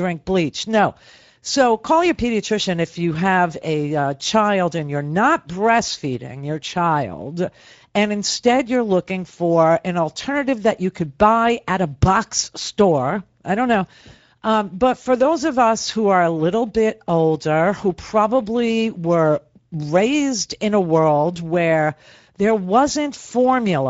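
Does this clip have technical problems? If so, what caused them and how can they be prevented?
Yes. Speex codec damage runs throughout the speech clip and is plainly audible. Speex is a CELP codec: it models the vocal tract with a filter and spends a limited bit budget coding the excitation that drives it. The coarse excitation comes out as a noisy, hoarse texture over the speech, which points to a bitrate of around 16.8 kbps. To prevent it, use a higher Speex quality setting or a modern codec such as Opus.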